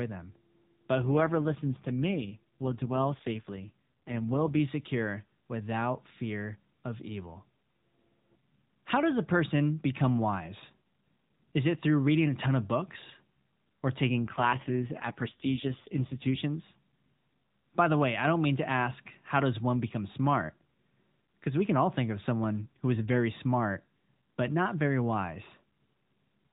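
Speech sent over an AMR narrowband mobile codec has two AMR rate drops, at 1.02–4.60 s (just before "secure without fear of") and at 14.20–16.44 s. The codec's rate falls, fitting a drop from 12.2 to 4.75 kbps, and the voice turns rougher and more synthetic, with no gap or band change.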